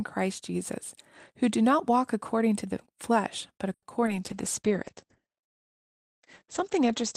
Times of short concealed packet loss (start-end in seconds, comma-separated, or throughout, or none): 4.06-4.09